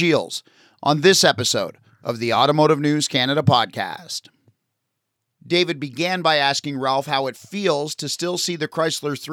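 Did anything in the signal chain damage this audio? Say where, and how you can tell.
No, nothing along the chain seems to have damaged this speech recording, so there's no stage to point to here.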